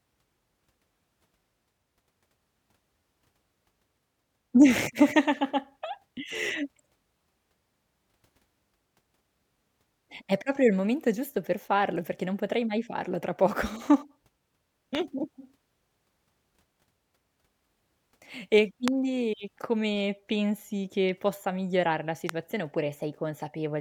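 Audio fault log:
14.95 s, 18.88 s and 22.29 s, loud pop: three single, sharp pops sit on top of the speech, which carries on beneath each one. They peak well above the speech, about 15 dB at the first and about 20 dB at the other two. The likely cause is a brief voltage pulse, as from a plug, switch, static or driver glitch, entering the signal chain. On the waveform each is a lone spike towering over the speech; on a spectrogram, a thin vertical line spanning the full frequency range.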